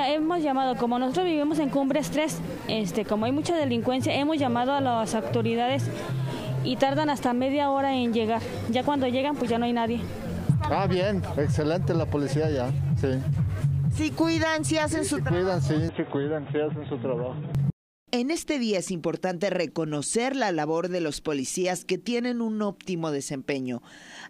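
An input switched to a poorer device, likely, accounts for the change from 15.89 to 17.55 s in this audio. Across that stretch the sound suddenly turns dull and boxy, with nothing above about 3.8 kHz, the narrow band typical of a weaker microphone or a headset's call profile. It then opens up again. There is no gap at either switch and the level holds steady, but a faint new background noise appears, roughly 45 dB below the signal.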